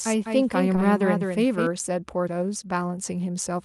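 A second copy of the audio, likely from an out-of-step capture or edit, is already mixed in when the clip starts and runs until 1.67 s. This doubled audio track trails the original by about a fifth of a second, about 5 dB quieter, dry and full-band, then cuts off abruptly.

Inside that stretch, from 0.75 to 0.80 s, a short concealed packet loss occurs: 20 ms of speech arrived too late, and the receiver filled it by extending the preceding sound, stretching timing by a few milliseconds and leaving a brief smear.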